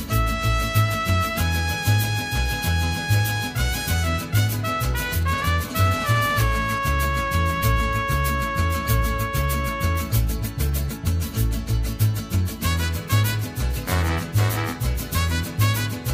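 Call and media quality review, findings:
GSM phone buzz, 5.92 to 6.79 s. Hard, raspy buzz at about 217 Hz, heavy on harmonics, sitting about 20 dB under the audio and unrelated to it. Steady for the whole stretch, so it's a nearby 2G handset on a call, not a data transfer. The audio front end is rectifying the 217 Hz transmit bursts. Check mic input shielding and filtering.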